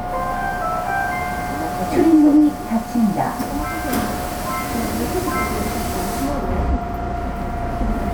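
No technical faults can be heard anywhere here.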